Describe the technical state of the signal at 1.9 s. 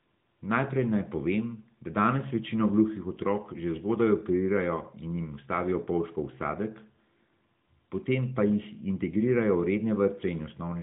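At 1.9 s the signal is intact, with no fault at that moment; the speech carries the narrowband character of the AMR narrowband mobile codec path, with nothing heard above about 3.8 kHz.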